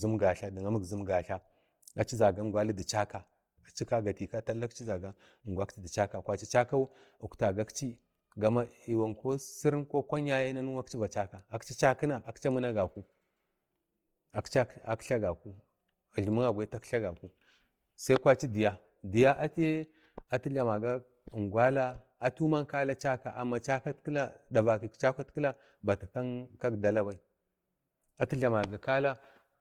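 From start to finish, the audio has likely passed through Opus compression in its CELT music mode at a low rate, with the damage consistent with something near 24 kbps. The encoder keeps every band's energy but, short of bits, refills detail by folding lower bands or adding noise. The speech keeps its full bandwidth, reaching to about 20.2 kHz, yet its tones come out plainly rough, grainy and noisy rather than clean.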